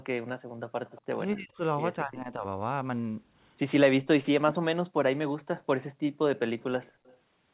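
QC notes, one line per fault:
0.86–1.02 s, 6.6–6.64 s and 6.83–7.17 s, echo leak: a faint delayed copy of the speech slips in, trailing the original by roughly 230 ms and sitting around 30 dB under the main speech, a bit lower (around 35 dB down) in the last stretch. It's most likely a far-end speakerphone whose echo canceller didn't scrub everything its mic picked up, so a narrowband ghost of the talker bounces back to us.
1.35–1.61 s, 2.04–2.44 s and 4.33–4.74 s, speech suppressed in double talk: the talker suddenly dips for a few hundred milliseconds, by around 20 dB in the first two spots and much harder, close to 40 dB, at 4.33 s, where it's nearly cut out. The likely cause is both ends speaking at once, with the echo canceller unable to tell the local voice from the loudspeaker echo and clamping down on everything.
6.93–7.04 s, background gated by the echo canceller: the room tone drops away by about 28 dB for roughly a tenth of a second, landing right inside the last echo burst, then snaps back. 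The canceller is hitting the mic hard while the loudspeaker plays and releasing it once it lets go. The whole thing tops out near 4 kHz, which fits a narrowband G.711 call path.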